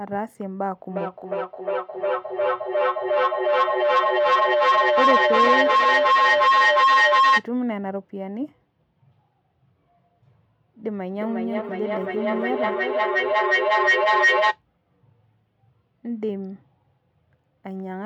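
From 0.89 to 7.51 s, two devices in the same room on the same call form a loop in which each pass from microphone to loudspeaker and back comes out louder than it went in. This is feedback howl. Instead of fading, the sound narrows to a piercing tone around 1 kHz that pulses at an interval of around 400 ms. It climbs to about 9 dB above the speech and persists until the loop is broken.

From 10.88 to 14.63 s, the same kind of two-device loop produces feedback echo between two devices. One device plays what the other's microphone sent, and that microphone picks it up again. Each device's echo canceller removes only its own playback, so the returning sound gets through. Speech comes round again at an interval of around 400 ms, each repeat thinner and more ringing, and the repeats pile up to about 7 dB above the speech rather than dying away.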